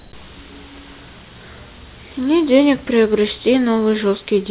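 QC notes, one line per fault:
0.00–0.12 s, comfort noise in place of the background: the opening 120 ms is steady, featureless hiss with a level change of about 58 dB, likely receiver-generated fill during a discontinuous-transmission pause.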